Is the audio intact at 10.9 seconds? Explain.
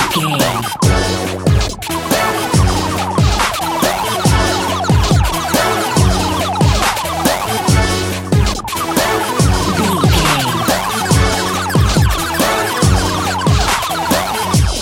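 Yes, the audio is intact at 10.9 seconds, with no dropout, click, distortion or other fault audible at that point.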